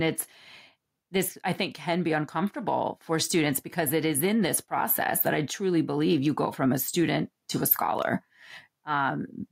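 From the very start and right through the speech, there's gain pumping going on. The level gets shoved back down the moment the talker gets loud, with a swing of around 5 dB. Loud and quiet bits sit closer together than they should, so it all feels a bit squashed. The likely culprit is the mic gain being cranked way too high, with a fast limiter or compressor clamping down on every peak.

Then, just after "a student to a", from about 7.98 to 8.02 s, there's a short burst of loose connector crackle, a quick scratchy, irregular rasp. That's what you get when a worn or dirty contact shifts and keeps making and breaking, chopping the signal up, with little pops if there's any DC on the line. It's brief.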